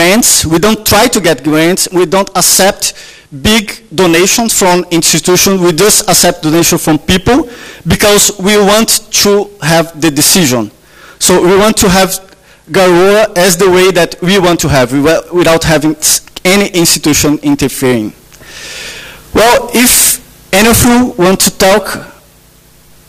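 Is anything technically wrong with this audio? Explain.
Yes. Hard clipping runs through the whole clip. The signal is driven about 24 dB beyond what the stage can pass, so every peak is cut off flat at the ceiling, and nearly a third of the samples sit pinned there. Those squared-off tops generate strong harmonics high up the spectrum. With overload this heavy, the result is not occasional crackle but a constant harsh fuzz over every loud moment of the sound.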